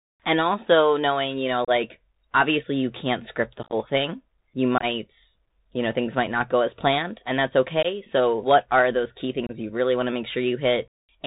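From start to finish the speech is band-limited and plainly degraded: nothing sits above 4 kHz, s sounds are scratchy, loud high-frequency sounds distort, and a granular hiss runs under everything. This is the Bluetooth CVSD headset codec. It sends one bit per sample at 64 kHz, which fits a 64 kbps link, and each bit only says whether the waveform steps up or down. Fast, loud movements outrun the adapting step size.

At 1.65 s, right after "also knowing you know", the sound drops out for about 30 ms with abrupt edges. This is unconcealed Bluetooth headset packet loss, here roughly seven short voice packets replaced by silence or an idle pattern. On this CVSD link the speech comes back quieter for a moment after each gap. From 3.63 to 3.74 s the losses are scattered, totalling 63.8 ms across 90 ms, with the longest run 18.8 ms, and they chop the sound. Right after "thing you" at 4.78 s, 33.8 ms is lost over 45 ms, with the longest run 22.5 ms. 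At 7.83 s an 18.8 ms hole falls between "as planned and that's" and "so what are those". At 9.47 s a further 26.2 ms is lost.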